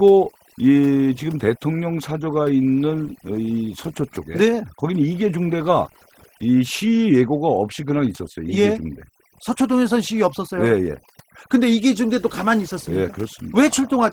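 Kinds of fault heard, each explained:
Overdone noise removal: Throughout, a noise suppressor set far too aggressively keeps clamping individual frequency bands whenever their level drops close to its noise estimate. The noise floor is pushed down, leaving small twinkling specks where bands briefly flicker back on. Softer parts of the speech sit near that threshold and get clamped too, with their quieter detail eaten away.
Opus voice compression: Throughout, the speech carries plainly audible damage from the Opus codec running in its hybrid mode, where the SILK linear-prediction coder handles the range below 8 kHz and a CELT layer codes everything above it. The band stays fullband, with content reaching to about 20.2 kHz. The coarsely coded excitation lends the voice a hoarse, slightly robotic edge, which fits a low bitrate around 16 kbps.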